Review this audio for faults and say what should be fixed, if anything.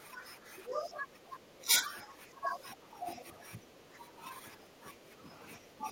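Speech suppressed in double talk runs from 0.09 to 5.86 s. The speech repeatedly ducks by up to about 10 dB, roughly five seconds in total. The likely cause is an echo canceller mistaking this talker for loudspeaker echo while both sides spoke, and attenuating everything. Better double-talk detection in the canceller, or headsets that remove the acoustic echo path, would keep near-end speech at full level while the far end talks.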